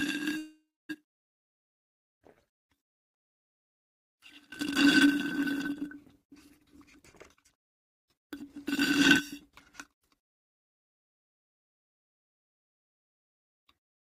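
From 0.37 to 0.91 s there is a call audio freeze: the last sound trails into a fading buzz or hiss, then about 270 ms of silence, before resuming exactly where it stopped. Likely late packets emptied the jitter buffer. Unlike a dropout, nothing is lost; a 517 ms gap is inserted instead.

Between 1.42 and 3.58 s a jitter buffer slow-down repeats tiny stretches to rebuild the buffer. It plays at 95% speed, adding 121 ms, drawn out but unchanged in pitch.

A jitter buffer speed-up runs from 6.63 to 8.58 s at 122% speed, trimming roughly 400 ms and sounding clearly hurried. A milder one from 9.51 to 10.54 s runs at 105% speed and removes about 50 ms. In both, pitch stays constant, so it isn't a simple playback-rate error.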